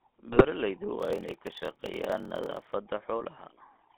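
A speech recording carried over a GSM full-rate codec throughout, the sound pointing to the 13 kbps coder squeezed into a line band of about 200 Hz to 3.4 kHz. Its pulse-driven vocal-tract model and thinned excitation give the voice a plainly audible buzzy, gravelly roughness with nothing above that band. From 0.32 to 0.45 s, GSM bit errors corrupt a handful of frames, which fits a bit error rate of a couple of percent. The decoder then builds wrong filter, pitch or gain values, and the speech breaks into a squawking, gargling burst. Between 0.98 and 2.75 s there is a block size mismatch (padded): one stage writes short blocks, which fits 1024-sample writes, and the reading stage zero-fills the remainder. The inserted gaps buzz at 38.3 Hz, and the speech slows to 0.889 times normal speed with its timbre unchanged.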